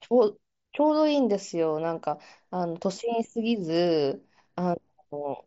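No technical faults can be heard in the speech. It comes through the Bluetooth mSBC headset codec, which caps the bandwidth at about 8 kHz and leaves only a light grainy texture on louder sounds.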